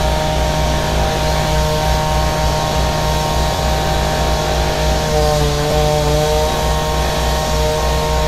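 Around 3.56 to 3.58 s there's a repeated buffer. New audio didn't arrive in time, so the same roughly 11 ms slice, which fits a 512-sample buffer, played twice more, dropping about 20 ms. It comes across as a quick buzzy click. At 5.71 s it happens again with one extra play, a shorter tick.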